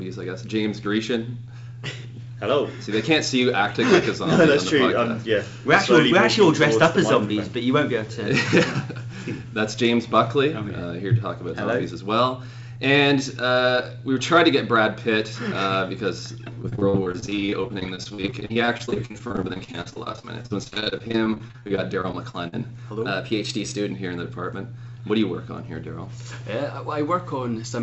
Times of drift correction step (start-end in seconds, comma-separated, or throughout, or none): 23.06-23.90